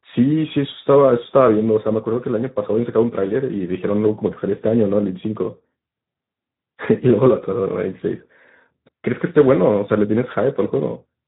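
Speech runs through Speex codec damage for the whole recording: a hoarse, noisy grain sits on every syllable and the top band turns to a hissy, shaped fill. The plain roughness fits a low setting around 11 kbps, unlike the swirly, warbling treble of MP3 or Opus.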